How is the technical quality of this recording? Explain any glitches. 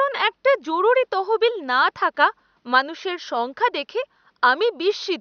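No glitches or faults heard.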